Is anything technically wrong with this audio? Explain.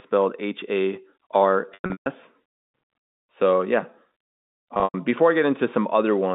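Yes. Packet loss with pitch repetition occurs at 1.74 to 2.06 s and 4.74 to 4.94 s, ending just before "before i." The receiver repeated the last pitch period to cover the missing packets. Short gaps sound held and buzzy. Runs up to 140 ms fade to silence, and the speech then cross-fades back in over the narrowband G.711 telephone sound.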